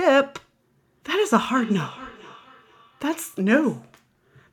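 From 1.5 to 3.89 s there is feedback echo between two devices: a second device in the room replays the call and this microphone picks it up again, beyond its own echo canceller's reach. The speech returns roughly every half second, thinner and ringing, peaking about 20 dB below the speech.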